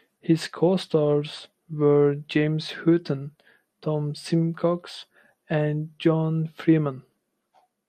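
A speech recording that has been squeezed through MPEG Layer II at a low bitrate, likely around 80 kbps, so the MP2 compression has too few bits to cover all of its sub-bands. Upper bands drop out and come back from moment to moment, and what remains is coarsely quantised. Throughout the clip the speech sounds dull and muffled, with a gurgling, granular edge on it that is plainly audible, much like weak digital radio.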